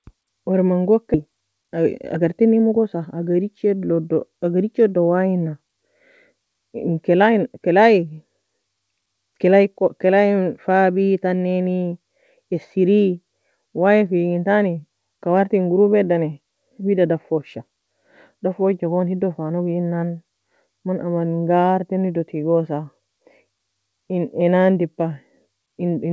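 At 1.14 s a skip ahead occurs: roughly a second of speech was thrown away while later audio was already queued, so playback jumps forward with no fill. The waveform shows two unrelated segments butted together, and the spectrogram shows an abrupt change in harmonic pattern.

From 1.26 to 2.96 s comes a jitter buffer speed-up. The receiver, now holding too much audio, repeatedly cut out pitch-period-sized pieces, about 200 ms in total, so speech runs about 11% fast at unchanged pitch and sounds hurried. On a spectrogram, syllables look compressed in time while harmonic spacing stays put. The band ends sharply at 8 kHz throughout, which points to a G.722 call codec.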